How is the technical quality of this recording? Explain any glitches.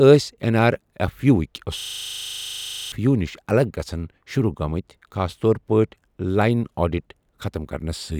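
The recording has one serious glitch. A system hang loop runs from 1.8 to 2.92 s. The playback system froze while the audio hardware kept replaying its last 40 ms buffer, so that slice of speech repeats 28 times at 25 Hz. It sounds like a rapid, machine-gun stutter, and about a second of speech is lost.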